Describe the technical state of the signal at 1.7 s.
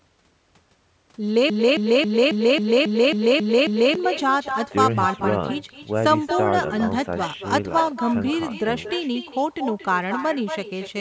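At 1.7 s the signal is inside a broken-record loop running from 1.50 to 3.95 s. A 271 ms fragment repeats exactly, back to back, nine times. The likely cause is a player or stream stall that kept resending its last buffer, so the audio meant for that span is lost.

An uncancelled echo is also present here and throughout. The far end's loudspeaker feeds its microphone, returning the sound roughly a fifth of a second later, about 9 dB quieter and thinner.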